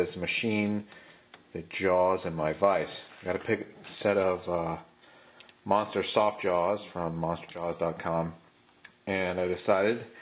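No faults present; the content sits below 4 kHz, as expected from the telephone-band codec on the call path.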